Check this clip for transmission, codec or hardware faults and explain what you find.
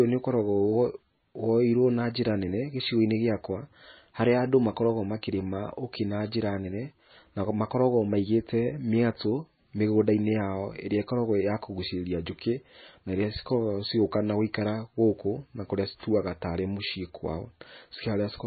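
There is one fault, heard throughout the speech. Likely MP3 compression at heavy damage: the treble stops at about 4.6 kHz, weak frequency lines flicker between frames, and the sound turns watery with smeared attacks, fitting a bitrate around 18 kbps.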